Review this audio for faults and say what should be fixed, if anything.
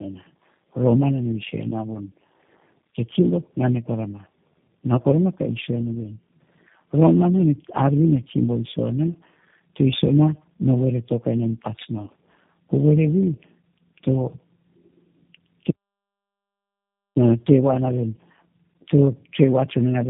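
The speech passed through tandem speech coding across the whole clip: it was decoded and re-encoded at each link border, and the sound points to three passes through a low-rate coder like 8 kbit/s G.729A. Each pass compounds the last, leaving the speech rough, muffled and warbly, with nothing above 3.8 kHz. Keeping the call in one codec end to end, or passing it through without transcoding, would prevent this.

From 15.71 to 17.16 s there is an audio dropout to silence. The input was likely lost while recording continued, so about 1.45 s of the speech is replaced by digital silence with no room tone. Monitoring the input connection and link during capture would catch this before the audio is lost.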